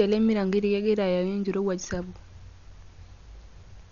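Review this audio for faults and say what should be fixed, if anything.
Throughout the speech the sound is dull, with nothing above 7 kHz, and a rough, fluttering noise clings to voiced tones. This is likely Dolby Digital compression at a starved bitrate, around 48 kbps. The encoder narrowed the band and left many frequency lines without mantissa bits, so the decoder filled them with dither noise. Plain low-pass filtering would sound dull but clean, and MP3 damage tends toward swirly, watery artefacts rather than this noise-filled roughness. To prevent it, encode at a much higher bitrate or deliver the original uncompressed audio.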